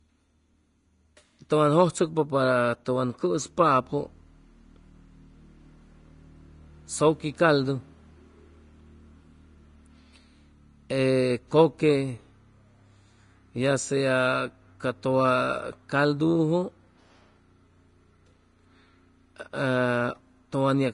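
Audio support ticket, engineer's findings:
Vorbis compression, throughout the clip. The speech is plainly hissy and grainy, with nothing above 10.6 kHz. Likely a low-quality Vorbis encode, fitting a bitrate near 30 kbps. Coarsely quantised treble replaces fine detail with noise, roughening tones and blurring attacks.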